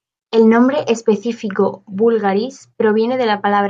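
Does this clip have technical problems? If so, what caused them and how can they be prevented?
No, nothing in this speech clip points to a technical fault, so there is no cause to trace and nothing to prevent.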